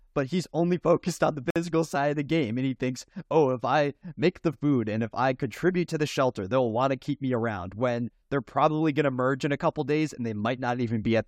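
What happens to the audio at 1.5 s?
At 1.50 s the speech drops into a gap at a join of encoded pieces, a silence of about 54 ms lasting until 1.56 s. It fits two separately encoded segments being butted together without trimming: the encoder's start-up delay and the padded final frame both remain, leaving dead air. The codec smears the edges of the gap, and the speech then resumes exactly where it broke off.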